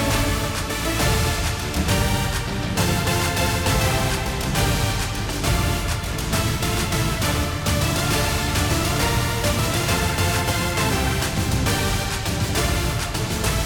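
No technical faults can be heard anywhere in this recording. Nothing in the audio calls for a timestamp or a repair.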